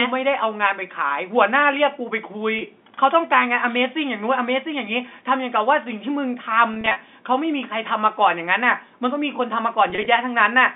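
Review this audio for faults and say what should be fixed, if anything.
Packet loss with pitch repetition occurs at 2.59 to 2.61 s, 6.72 to 7.00 s and 9.90 to 10.06 s. The receiver bridges each gap by repeating the last pitch period. The 20 ms gap sounds briefly held and buzzy. The later bursts scatter 140 ms and 70 ms of loss, in runs up to 40 ms. To prevent it, stabilise the network path and add forward error correction or a deeper jitter buffer.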